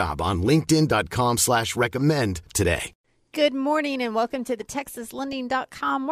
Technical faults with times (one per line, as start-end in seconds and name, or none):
3.33 DAB burbling
5.06-5.33 DAB burbling